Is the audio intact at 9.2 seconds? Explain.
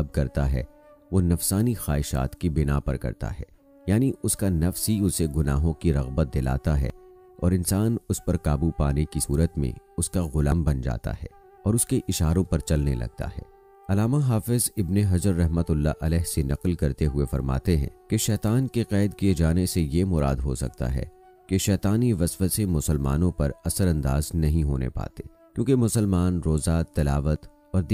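No. At 9.24 s the sound jumps forward with no gap, skipping roughly 40 ms. This is likely a dropped buffer (overrun): the hardware overwrote samples before the program collected them, so the surviving pieces were butted together.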